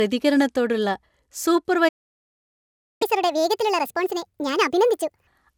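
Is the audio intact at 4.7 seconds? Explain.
No. At 4.7 s the speech runs fast and high, about 1.5 times normal speed and roughly seven semitones up, within a catch-up at higher speed from 3.02 to 5.27 s. After a stall, the player resamples its backlog to win back lost time, raising speed and pitch together before dropping back to normal.

The sound there is also swirly, smeared and hollow, with blurred attacks. This generation loss is likely from many passes of decoding and re-encoding, around seven, consistent with MP2 at 128 kbit/s, each pass adding fresh quantisation noise and spectral holes.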